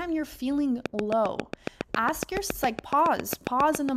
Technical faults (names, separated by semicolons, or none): train of clicks